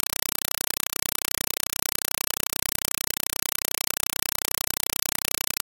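From start to finish, harsh, very loud chattering static replaces the speech, pulsing about 31 times a second in 4 ms bursts separated by silence. This is a compressed stream played as audio: AC-3 frame data, which fits a 192 kbps stream, was treated as ordinary samples instead of being decoded.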